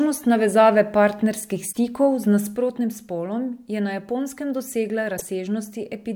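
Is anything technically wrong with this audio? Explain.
Yes, there are two separate problems in this speech clip.

The first is damaged data in a compressed stream, heard twice: from 1.69 to 1.77 s and again from 5.14 to 5.22 s. Each time a short stretch of the encoded data is corrupt, so the decoder can't make sense of those frames, loses its place, and hunts for the next valid frame header. You hear a brief glitch of roughly 80 ms.

The second is one channel dropping out, from 2.56 s right through to the end. The level drops abruptly by about 6 dB and stays there. That step is what you'd expect when a stereo recording is folded to mono and one side goes silent: the half of the sum that came from the missing channel vanishes, and anything that lived only on that side is gone too. A lost channel is the likely cause here.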